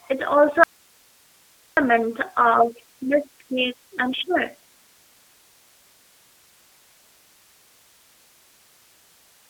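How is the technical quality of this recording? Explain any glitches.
Quality is poor: the speech passes through a low-rate voice codec throughout and suffers one clear dropout near the start.

G.729 codec, whole clip: 8 kbit/s G.729A model-based coding confines speech to roughly 300 Hz–3.7 kHz, sounding rough and synthetic; a spectrogram shows nothing above 3.8 kHz.

Audio dropout to a faint residue, 0.64 to 1.77 s, right after "it also": speech vanishes abruptly for about 1.1 s, leaving hiss roughly 40 dB down, likely a broken feed while the path stayed live. The waveform collapses to a thin flat band.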